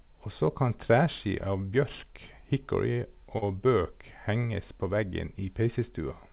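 At 3.38 to 3.44 s, about 40 ms of the call's audio failed to reach the decoder in time, a short concealed packet loss. The receiver covered roughly 36 ms of that gap by extending the preceding speech, carrying its pitch forward or filling with shaped noise, then crossfading back into real audio. The result is a brief smeared wobble in the speech, over the narrowband telephone sound of a call path cut off at 4 kHz, consistent with G.711 A-law.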